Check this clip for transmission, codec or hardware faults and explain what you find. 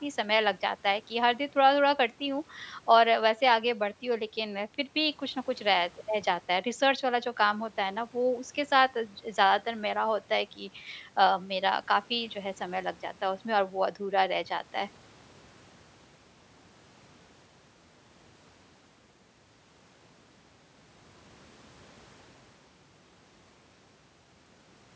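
The speech carries the ordinary signature of a call microphone chain, with the lowest bass trimmed by its high-pass filter and nothing above 8 kHz, and no transmission, codec or hardware fault can be heard anywhere in the recording.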